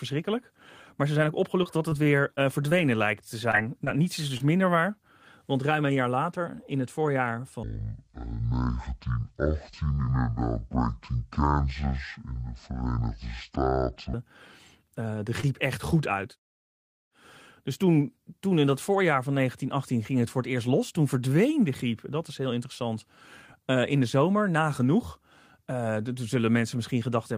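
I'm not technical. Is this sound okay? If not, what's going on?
No. There are four kinds of problem in this speech clip.

From 1.63 to 2.73 s there is repeated packet loss, which gives a robotic sound. Six separate pieces of the signal failed to arrive. The longest gap was about 24 ms. Each time, the receiver patched the hole by carrying the previous sound forward, so about a tenth of that stretch is filler. Because the gaps come so close together, the voice sounds choppy.

Short concealed packet loss happens three more times nearby: 3.51 to 3.55 s, just after "lijkt te"; 3.85 to 3.97 s, just before "niets is"; and 4.37 to 4.42 s. Each time, around 20 ms of audio is lost and replaced with an extension of the sound just before it. You hear a quick smear or wobble. In the middle case, a few extra milliseconds are added, so the timing shifts very slightly.

There is a section at the wrong speed from 7.63 to 14.14 s, starting right after "later in het voorjaar". 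It plays at roughly half speed. Because speed and pitch change together, the voice drops about ten semitones, to nearly an octave lower, and sounds slow and heavy. The likely cause is that this part was played or edited against the wrong clock rate.

At 15.41 to 15.45 s there is a short stall from a late packet. A piece of audio arrived about 18 ms behind schedule. The receiver held the last sound until it came in, then carried on. Nothing is lost, but one sound is stretched briefly and may have a faint buzz.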